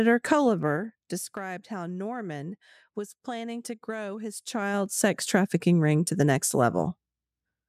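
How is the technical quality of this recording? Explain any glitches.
The recording has one recurring glitch, zipper noise on two level changes. From 0.42 to 1.32 s the speech drops by roughly 15 dB, and from 4.32 to 5.1 s it climbs back by about the same amount. Each move is made in unsmoothed 2 dB jumps, around seven per second, and every jump leaves a small click, so a ticking rides on the speech while the level shifts. A proper fader move glides without any such steps or clicks.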